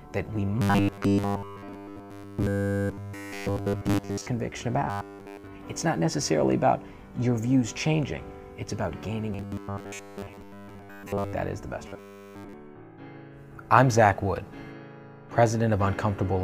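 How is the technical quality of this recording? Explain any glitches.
Not great: there's robotic sound from repeated short buffers at 0.62–4.27, 4.90–5.47, 9.33–11.33 and 11.88–12.53 s. A rigid 100 Hz metallic buzz results, likely from roughly 10 ms chunks looping while almost all fresh audio gets skipped.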